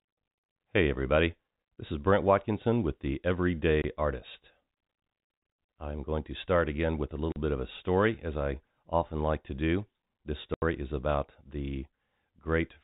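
This telephone-band speech recording, with nothing above 4 kHz as expected from G.711 coding, drops abruptly to silence three times: from 3.82 to 3.84 s (20 ms), 7.32 to 7.36 s (40 ms) and 10.54 to 10.62 s (80 ms), each gap longer than the last. These holes are packet loss filled with silence. The receiver never got those stretches of audio and played nothing in their place. The durations are all whole multiples of 20 ms, which fits 20 ms packets.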